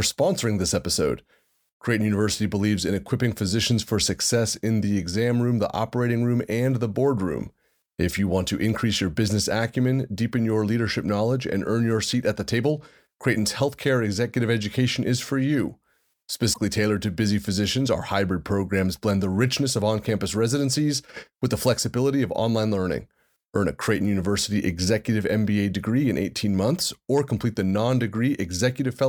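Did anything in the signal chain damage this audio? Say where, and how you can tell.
Yes. The compressed stream carried damaged data: a short run of corrupted bytes in the encoded file left the decoder unable to read the frames there, so it lost sync and hunted for the next valid frame header. The fault sits at the codec or storage stage. From 16.52 to 16.58 s the speech briefly breaks up, just before "tailored to busy physicians". The decoder then resyncs.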